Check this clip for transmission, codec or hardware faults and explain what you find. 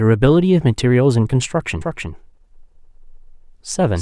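A doubled audio track appears from 1.81 s to the end. A second, slower path likely captured the speech again, mixing in a full-band copy about a third of a second late and roughly 5 dB quieter. It begins abruptly and sounds like a dry, uncoloured repeat of each phrase.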